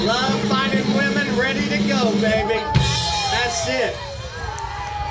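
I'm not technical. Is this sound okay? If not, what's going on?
Yes, nothing stood out as a problem when listening to it.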